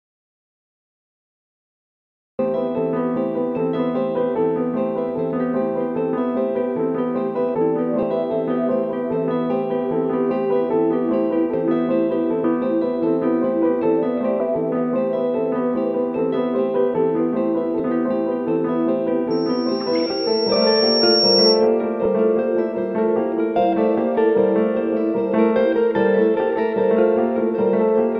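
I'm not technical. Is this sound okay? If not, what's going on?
No. There are three kinds of problem.

First, an audio dropout to silence. The clip opens in total silence, already under way from the start, until about 2.39 s. There is no background hiss at all, just nothing. That points to the input being lost, most likely a disconnected microphone, a broken link or a mute left on. Whatever happened in that stretch was never captured.

Second, compressed frames skipped. At 8.02, 12.44, 14.40, 17.79, 20.54 and 22.05 s, the sound jumps forward slightly. Each jump loses about 50 to 70 milliseconds. That is two or three blocks of roughly 26 milliseconds each. The file stores sound in these small blocks, and some were missing or damaged, so the player skipped them. Each join is a short smeared blip, not a sharp click.

Third, a loudspeaker feedback squeal from 19.30 to 21.68 s. A microphone was picking up its own loudspeaker. 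One high tone, around 5.5 kHz, kept feeding back into itself. It swells over about two seconds until it is a little louder than everything else, then stops. One of the skips, at 20.54 s, falls inside the squeal.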